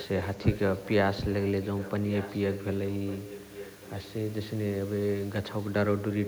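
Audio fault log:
0.00–0.59 s, 1.43–2.65 s, 2.91–4.13 s, 6.13–6.27 s, echo leak: speech repeats 1.15 s late, about 10 to 15 dB quieter, likely leaking past a far-end echo canceller. Spectrograms show faint, delayed duplicate harmonic traces.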